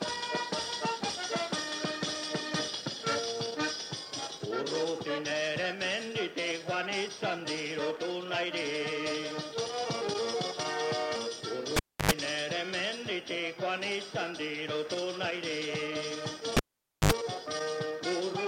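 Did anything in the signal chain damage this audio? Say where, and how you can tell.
Yes, in the analogue wiring. A cable was pulled and plugged in twice, at 11.77 to 12.11 s and 16.57 to 17.12 s. Each starts with a pop as contact breaks. Near silence follows, for 296 ms the first time and 503 ms the second. Then comes a 50 Hz mains buzz, 88 ms and 73 ms long, while only the plug tip touches and the shield is open. A second pop marks full reconnection.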